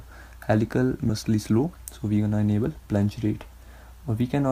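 At 1.09 to 1.11 s there is a skip ahead: roughly 0.7 s of audio is thrown away while later audio was already queued, and playback jumps forward with no gap filled in. The two sides meet almost directly, so the sound lurches abruptly. On a waveform the envelope changes shape instantly at the join, and a spectrogram shows harmonic tracks that break off and restart elsewhere with no silent column between.

From 1.24 to 2.41 s a jitter buffer speed-up follows. With the buffer now running deep, the receiver trims short pitch-period-length pieces over and over, removing around a tenth of a second in total, so this stretch plays at 108% speed with pitch unchanged. It sounds hurried. The spectrogram keeps the same harmonic spacing while events crowd closer together in time, and the waveform shows tiny, closely repeated splice points within the periodic cycles.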